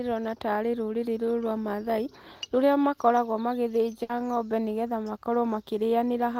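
At 4.03 s, a burst of packet loss cuts into the speech for about 90 ms. The receiver stretches the last sound for roughly 60 ms, fading it down. About 60 ms of speech is skipped. Playback resumes just before "ng'ombe nĩgetha".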